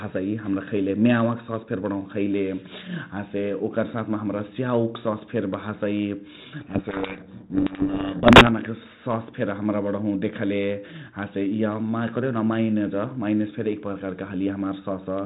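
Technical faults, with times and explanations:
6.60–8.48 s, codec payload misread: G.726 code words decoded in the wrong bit order bury the speech in harsh distortion, far rougher than the light, level-following hiss of the 32 kbit/s ADPCM.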